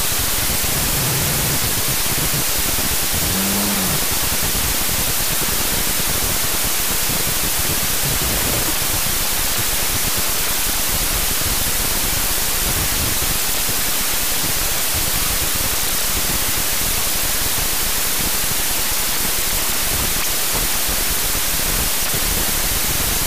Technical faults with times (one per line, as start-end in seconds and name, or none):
0.00-23.26 wrong sample width